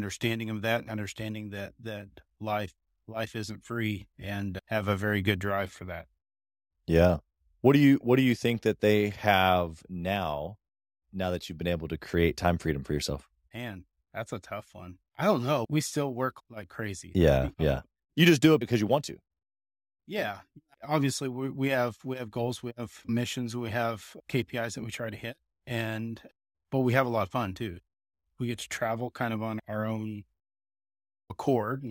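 Throughout the speech, a crude rate conversion repeats or drops samples instead of filtering, in a pattern consistent with a 32 kHz to 48 kHz step. The resulting error, roughly 25 dB below the speech, adds a gritty, inharmonic fizz that rides on loud and bright sounds.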